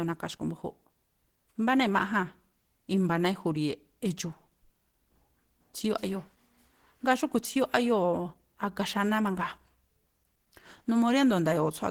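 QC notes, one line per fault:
Throughout, Opus compression. The speech sounds rough, grainy and somewhat hoarse. The damage is plainly audible. Energy stays present in every band, so there is little swirling or hollowness. Fine detail turns into noisy texture instead. Content still reaches 20.2 kHz, so the bandwidth is not narrowed. The likely cause is an Opus encoder running in hybrid mode at a low rate, which fits about 16 kbps. Too few bits remain for clean upper bands.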